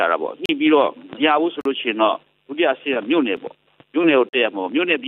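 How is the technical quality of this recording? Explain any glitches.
The recording has four short blocks of digital silence: at 0.46 to 0.49 s (35 ms), 1.61 to 1.65 s (43 ms), a 5 ms gap at 3.37 s, and 4.29 to 4.33 s (43 ms). The output was zeroed, likely because a buffer wasn't filled in time. The two 43 ms gaps fit a 2048-sample buffer. The cut to true silence with no fade distinguishes these from a level dip or fade-out. The gaps are heard as short holes, and as a tick at 3.37 s.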